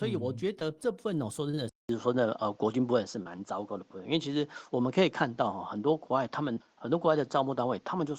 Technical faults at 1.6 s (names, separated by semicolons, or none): short concealed packet loss; input switched to a poorer device